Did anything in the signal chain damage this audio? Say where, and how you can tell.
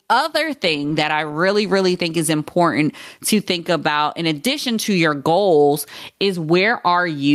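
Yes. Gain pumping runs through the whole speech clip: the level ducks by around 15 dB under every loud syllable. The likely cause is input gain set far too high, with a fast limiter in the processing stage clamping each peak and squashing dynamics.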